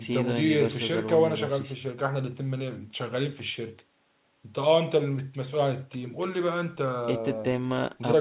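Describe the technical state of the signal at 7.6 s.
At 7.6 s the speech is intact, carried through the call path as narrowband audio with nothing above 4 kHz and no fault at that moment.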